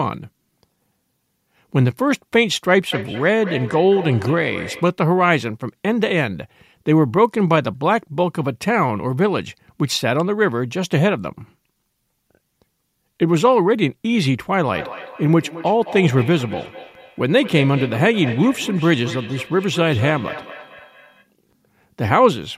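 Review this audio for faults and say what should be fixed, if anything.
Feedback echo between two devices appears from 2.92 to 4.96 s and again from 14.74 to 21.29 s. Speech returns at an interval of about a fifth of a second, peaking about 14 dB below the speech, because another device in the room replays this microphone's signal and the echo canceller only removes its own playback. To fix it, mute the second device's speaker or microphone, or keep only one device on the call.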